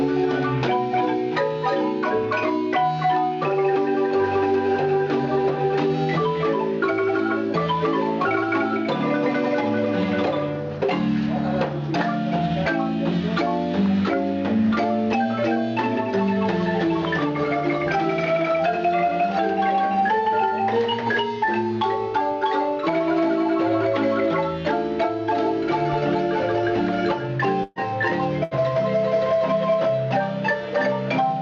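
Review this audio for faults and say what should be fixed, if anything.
Burst of packet loss at 27.63 to 27.79 s and again at 28.44 to 28.54 s. In each, a run of audio never arrived in time, so the receiver stretched the last sound it had, letting it fade as a held buzz or hiss for about 122 ms and then 74 ms. The audio then resumes further on, with about 120 ms and 80 ms of the original missing. Adding forward error correction or a larger jitter buffer would prevent these gaps.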